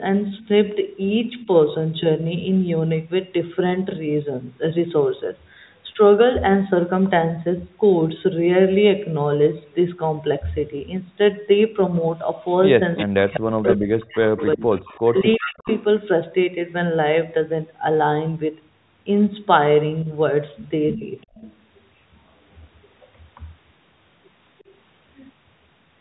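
A faint-to-clear delayed copy of the talker's own speech trails about 355 ms behind at 0.38–0.47, 12.45–13.4, 14.37–15.84, 21.35–23.08 and 24.58–24.75 s, ranging from roughly 35 dB down to only about 10 dB below the direct speech. This echo leak likely comes from a far-end loudspeaker whose echo canceller let part of the signal return. Where both sides overlap, the loudspeaker-side talker's speech dips or breaks up, deeply (up to around 40 dB, for about 1.5 s in total) between 12.8 and 15.67 s and more briefly (roughly 20 dB, about 150 ms) between 20.04 and 21.04 s. This is likely speech suppressed in double talk, the canceller attenuating the near talker along with the echo.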